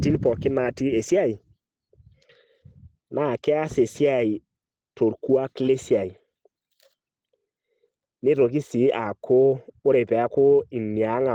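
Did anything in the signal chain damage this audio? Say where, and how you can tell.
No, no signal chain damage.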